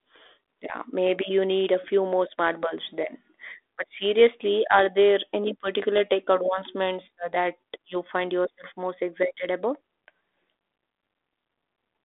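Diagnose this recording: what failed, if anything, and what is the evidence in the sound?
Nothing stood out on listening to this speech recording; no stage gave any audible sign of a failure.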